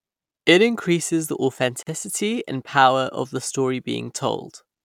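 A gap at a join of encoded pieces opens from 1.83 to 1.87 s, a silence of about 41 ms cutting into the continuous speech. The audio appears to have been encoded in separate segments and spliced without trimming, so the encoder's start-up delay and the padding on the final frame of the earlier segment both remain. The speech drops out abruptly, with edges softened by the codec, then resumes exactly where it stopped.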